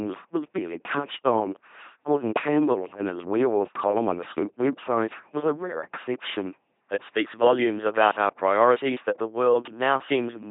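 From start to finish the speech carries the signature of an LPC-10 vocoder, with heavy damage that fits a 2.4 kbit/s link. Each frame is rebuilt from a ten-pole filter driven by either a pulse train or noise, so voices buzz mechanically, and hiss or buzz appears wherever the voiced/unvoiced decision misfires. On a spectrogram, voiced stretches show rigid, evenly spaced harmonics, and nothing appears above 3.8 kHz.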